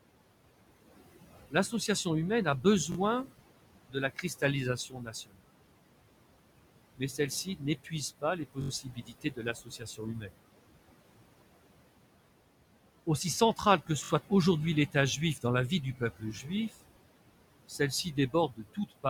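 Throughout, a noise suppressor pulls the room noise, which sits about 13 dB below the speech, down by about 21 dB between phrases, leaving noise suppressor artifacts: a pumping background that rises under the speech.

The suppressor also mistakes parts of the speech for noise, causing speech cut by the noise suppressor at 1.5–2.06 s (just before "humaine a", about 17 dB deep), 3.90–4.43 s (about 16 dB), 4.77–5.47 s (about 21 dB) and 6.97–10.37 s (about 21 dB). Soft sounds and word endings are turned down with the background and sound swallowed. Within the long stretch, only short parts are affected.

At 2.92–2.97 s, just after "humaine a", new audio arrives late and the device replays its last block twice more, giving a repeated buffer. The block is about 21 ms long, which fits a 1024-sample buffer, and it is heard as a quick stutter with hard joins.

The same fault returns at 8.62–8.70 s, with four extra plays, and at 14.04–14.10 s, with three. 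Both are heard as a short stutter.

Further suppressor cuts follow at 13.57–14.31 s (about 17 dB), 14.92–16.70 s (about 16 dB) and 17.68–19.05 s (about 19 dB). Scattered syllables fade or thin out there.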